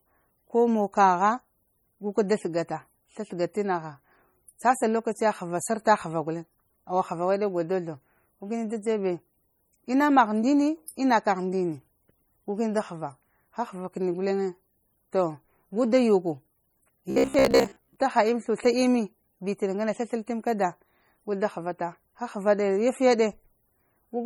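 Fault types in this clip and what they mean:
MP3 compression: Throughout the clip the speech has a watery, swirling quality, with metallic chirps on s sounds and smeared attacks, heavy enough to suggest a low bitrate around 32 kbps. The likely cause is MP3 coding that runs short of bits and drops quieter frequency lines, which then flicker on and off from frame to frame.
Robotic sound from repeated short buffers: From 17.10 to 17.97 s the speech turns into a rigid, metallic buzz pitched at 66.8 Hz that only loosely tracks the syllables. This is likely caused by new audio arriving too seldom, so the playback keeps repeating the last slice of sound, about 15 ms long, while real audio is skipped. Those repeats fill most of that stretch and impose their own fixed pitch.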